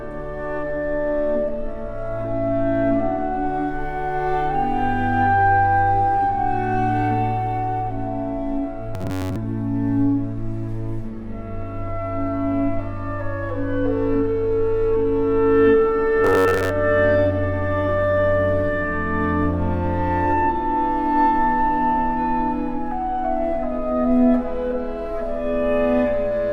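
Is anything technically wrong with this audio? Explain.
Yes. Twice, from 8.94 to 9.37 s and again from 16.25 to 16.70 s, the sound turns into a rigid, metallic buzz pitched at 93.8 Hz that only loosely tracks the underlying audio. This is robotic sound from repeated short buffers, likely caused by new audio arriving too slowly. The playback fills each gap by looping the last block of roughly 10.7 ms, and the buzz sits at the rate of that repeat. Around 70% of each span is repeated material, so most of the real audio there is skipped.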